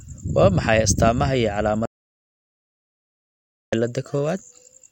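At 1.86 s the speech cuts off mid-flow and the clip falls into silence, with no room tone or hiss underneath, until the sound returns abruptly at 3.72 s. This is an audio dropout to silence lasting about 1.87 s. The likely cause is a lost input, such as a disconnected device, a failed link or an accidental mute, while the recorder kept writing silence, so whatever was said in that gap is gone.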